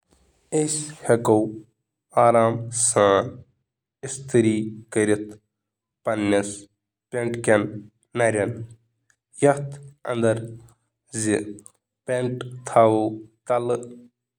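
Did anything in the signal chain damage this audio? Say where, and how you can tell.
Yes. Between 2.98 and 4.62 s, one channel of the stereo path runs a couple of samples behind the other, a tiny offset in the driver or buffer stage, and the two are then folded to mono. This channel delay produces comb filtering: the shared speech partly cancels at evenly spaced frequencies, with the first notch near 10 kHz. The top end turns dull in that stretch, then clears once the channels realign.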